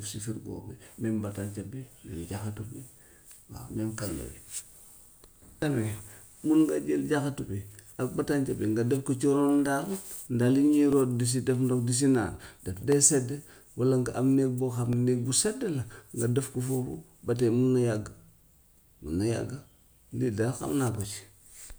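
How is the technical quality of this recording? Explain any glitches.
The recording has one fault: periodic USB or driver dropouts in the second half. From 10.92 s to 20.95 s, roughly every 2.0 s, a background task stalls the audio path and about a millisecond of speech is replaced by silence, heard as regular ticks over the voice.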